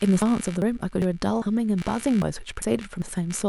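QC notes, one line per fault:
Throughout: computer activity noise. A buzzing, pulsing undertone sits beneath the speech for the whole clip, with pulses at roughly 70 per second and about 25 dB below the speech. Load changes in the computer shift the audio circuit's shared ground, so the buzz follows that activity rather than the talker. On a spectrogram it shows as faint evenly spaced horizontal lines from a base near 70 Hz, present even in pauses between words.
0.22, 0.62, 1.02, 1.42, 1.82, 2.22, 2.62 and 3.02 s: audio missing between chunks. The speech skips abruptly eight times at a steady 0.4 s spacing, each skip dropping about a tenth of a second of sound. The likely cause is audio being captured in 0.5 s chunks with a slice lost at each handover and the two sides butted together. The waveform shows sudden discontinuities at those points, and the spectrogram shows vertical seams where formant tracks jump.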